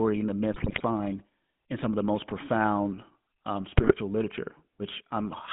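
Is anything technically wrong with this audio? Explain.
Yes. Throughout, the GSM full-rate codec rebuilds speech from a vocal-tract model and sparse pulse excitation, consistent with 13 kbps, in a 150 Hz to 3.6 kHz band, giving a buzzy, gravelly roughness. GSM bit errors appear from 0.52 to 0.83 s, after "and the", and from 3.77 to 3.96 s, after "the most profound um". Corrupted filter, pitch and gain values distort frames, producing squawks, pops and gargling.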